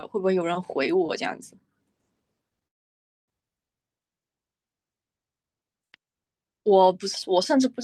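From 2.67 to 3.30 s, a call audio freeze leaves 0.6 s of silence. Likely delayed packets emptied the jitter buffer. Speech then resumes, nothing lost.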